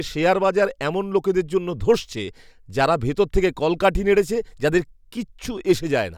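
No technical faults can be heard at any point in the speech recording, and the signal stays steady and continuous from its first moment to its last.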